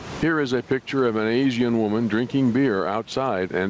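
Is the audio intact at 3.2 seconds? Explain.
No, gain pumping runs through the whole clip, including 3.2 s: the sound is squashed, with loud and soft parts pulled closer in level as the gain swings by around 15 dB, likely from overdriven gain hitting a fast limiter, unlike gating, which silences the gaps.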